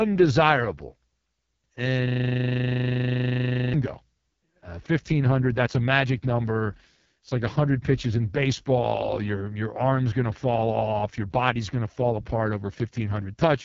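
From the start to the end, the speech carries heavy AMR wideband (HD Voice) codec damage. The coder models speech only up to 6.4 kHz and fills the band above with shaped noise. Nothing is present above 7.3 kHz. The sound is rough and raspy, which fits the lowest 6.6 kbit/s mode.

From 2.08 to 3.74 s, a system hang loop takes over. The machine stalled while the sound hardware kept replaying one 40 ms stretch of its buffer. That piece repeats about forty times at 25 Hz. It sounds like a coarse, steady buzz.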